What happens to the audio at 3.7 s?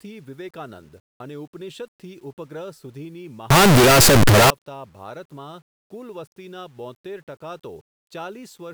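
From 3.50 s to 4.50 s the speech breaks into very loud, harsh distortion in which even quiet stretches sound as loud as strong ones, the sound of signed and unsigned mixed up. The likely cause is 8-bit samples read with the wrong sign convention, flipping the top bit so every zero crossing jumps across the whole range.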